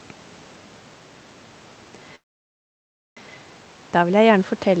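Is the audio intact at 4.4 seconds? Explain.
No. Automatic gain rising runs from 3.93 s to the end: after the input fell about 16 dB, the gain control lifts the level gradually, swelling voice and background together.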